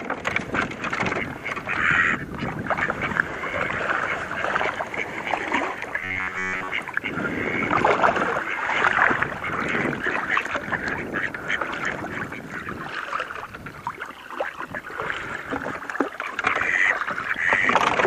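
From 6.01 to 6.70 s the sound turns into robotic sound from repeated short buffers: a rigid, metallic buzz near 94 Hz, likely from roughly 11 ms buffers replayed when new audio arrived too seldom. Most of the passage is repeats. Unlike a dropout, nothing goes silent; the fixed pitch persists instead.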